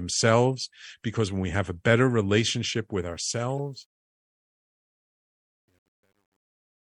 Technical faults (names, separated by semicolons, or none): truncation distortion on a fade; corrupt frame decoded